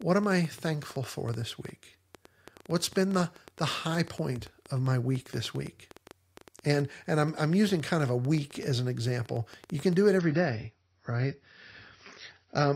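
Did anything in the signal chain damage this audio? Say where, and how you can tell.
Yes. A train of clicks runs from 0.02 s to 9.94 s, ending just before "do it". There are roughly 70 of them at about 7.9 per second, spaced irregularly, all with much the same shape and peaking a few decibels above the speech. They tick through the pauses as well, so they are added on top of the signal rather than part of it. The likely cause is electrical interference in the analogue wiring or a faulty connection or power supply.

The second fault is an adaptive stream at a lower bitrate, from 10.18 s to the end of the clip, starting right after "do it". The treble is abruptly cut, with nothing above 6.6 kHz, and coding artefacts rise, yet there is no gap at the switch. This points to the network stage. The stream's bandwidth fell and playback moved to a lower-quality version, consistent with AAC dropping from around 96 kbit/s to about 24 kbit/s.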